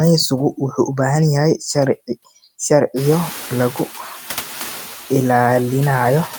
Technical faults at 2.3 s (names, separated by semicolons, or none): noise suppressor artifacts